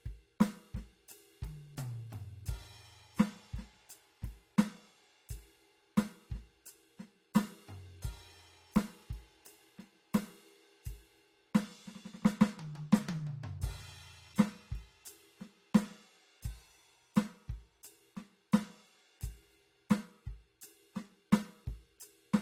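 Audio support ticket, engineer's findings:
Music, whole clip: mixed artefact types at once, a band-limited texture, content up to about 20.1 kHz. Likely transcoding between lossy codecs, an AAC-LC stage re-encoded to Opus at low rates near 48 kbit/s, the second encoder spending bits on the first one's artefacts and adding its own.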